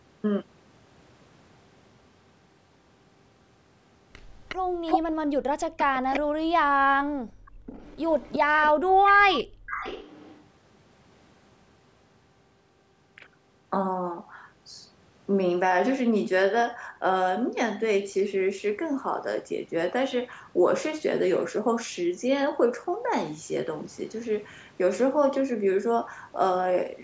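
From 4.49 to 5.0 s, a delayed copy of the speech sounds about as loud as the speech itself. It trails by 361 ms. This is an echo leak. The likely cause is a far-end loudspeaker whose echo canceller let its own playback back into the microphone. At 4.56 s the background gated by the echo canceller starts. The room sound drops by up to about 40 dB, with the gating running until 5.71 s. It is gone for well over half a second in total. The canceller was clamping the microphone while the loudspeaker played.

From 5.78 to 6.2 s the echo returns at the same 361 ms delay. This time it is clearly quieter than the speech. Between 6.32 and 6.55 s the speech itself dips sharply, by roughly 40 dB, for about a fifth of a second. This is speech suppressed in double talk. Both sides were likely talking at once, and the canceller turned its own talker down along with the echo.

From 6.83 to 7.66 s the background gates again, dropping by about 39 dB. 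From 7.46 to 10.41 s a faint echo, again 361 ms late, runs for about three seconds. Inside that stretch, from 8.43 to 9.69 s, the room sound gates a third time, by about 37 dB, for around half a second. The call's microphone processing leaves nothing above 8 kHz.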